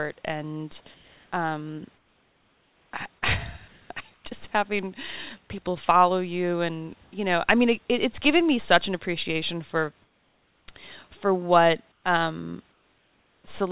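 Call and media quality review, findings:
Comfort noise in place of the background: 0.94–1.32, 1.96–2.92, 3.68–3.9, 4.14–4.24 (just before "just having people follow"), 7.04–7.12, 10.02–10.68, 11.92–12.04, 12.72–13.44 s. Room noise in pauses replaced by flat, featureless hiss, mostly about 2 to 9 dB quieter, once about 2 dB louder. Likely discontinuous transmission: sender's voice detector stops sending in pauses, receiver synthesises roughly shaped noise. Band ends at 4 kHz, which fits G.711 at 64 kbps.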